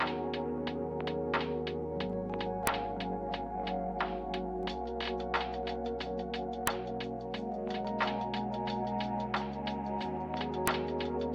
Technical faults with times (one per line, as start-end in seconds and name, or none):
2.67 file header played as audio
6.67 file header played as audio
10.67 file header played as audio